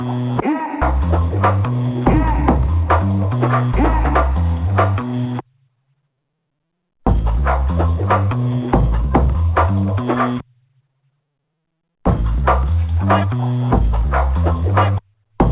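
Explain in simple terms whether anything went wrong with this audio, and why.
Nothing went wrong here: the sound came over a normal phone-style call link using the G.711 A-law codec, which passes everything below 4 kHz and drops what lies above it, so the narrower, telephone-like tone is simply how such a call is meant to sound.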